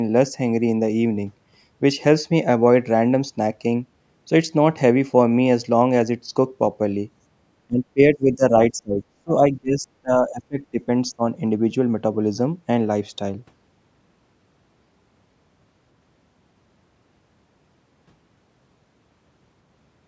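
An echo canceller likely failed to separate the talker from loudspeaker echo while both sides spoke, causing speech suppressed in double talk: the speech dips sharply from 7.66 to 8.53 s, deepest near 30 dB from 8.70 to 10.88 s, then briefly at 11.12 s.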